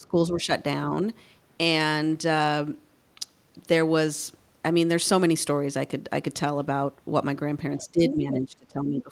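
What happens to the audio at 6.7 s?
Nothing goes wrong at 6.7 s; the speech continues intact through that point, with no dropout, click or distortion.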